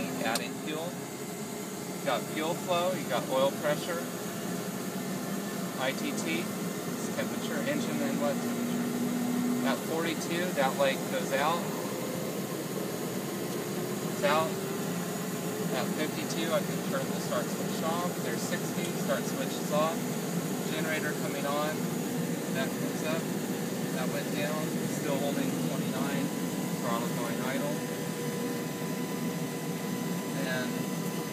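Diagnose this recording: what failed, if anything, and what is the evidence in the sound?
The failure is USB whine entering through the analogue wiring, specifically the power or ground path shared with a USB device. From 25.90 s to the end at 31.32 s, a steady fixed-pitch tone at 1 kHz sits under the sound, roughly 15 dB below it. A 1 kHz whine matches the USB bus's 1 ms frame rate. The current drawn in each frame modulates the supply or ground reference, and the converter picks that ripple up as an audible tone.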